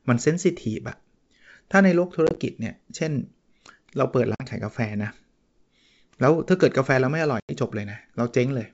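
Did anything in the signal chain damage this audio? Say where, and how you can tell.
Yes, packet loss on an ADPCM call in the network stage: silent holes at 2.27, 4.35 and 7.40 s (the first scattered gaps, the last about 90 ms), with the G.722 decoder's predictor briefly mistracking after each.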